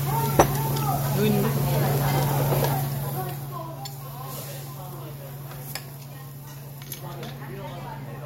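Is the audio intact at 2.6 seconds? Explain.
No. Zipper noise runs from 2.55 to 3.67 s, so 2.6 seconds falls just inside it. Over that stretch the level drops by roughly 15 dB, but instead of gliding down it moves in abrupt 2 dB jumps, around seven a second, with nothing smoothing the transitions. Each jump is a sudden discontinuity in the waveform, so a small click lands at every step, heard as a rapid ticking or zipping laid over the sound as it fades.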